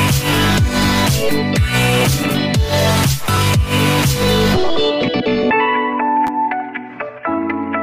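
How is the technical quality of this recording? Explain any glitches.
Two brief glitches, both repeated buffers. At 3.37 s and again from 6.27 to 6.29 s, new audio failed to arrive in time, so the playback device replayed the block it already held. Each repeated slice lasts about 11.6 ms, which fits a 512-sample buffer. It plays once extra at 3.37 s and twice extra at 6.27 s, with a hard join at each repeat. Because the slice is so short, each event sounds like a click or tiny buzz rather than an audible stutter, and no audio seems to be skipped.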